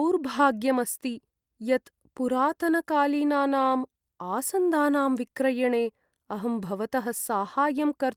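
No faults are audible anywhere in the speech.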